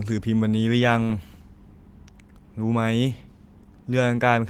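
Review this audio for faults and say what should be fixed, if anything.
No faults heard and nothing needs fixing; the Opus voice coding at 20 kbps holds full bandwidth with only light coding texture.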